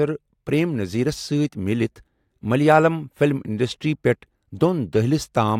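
No technical faults can be heard in the signal at any point in the recording.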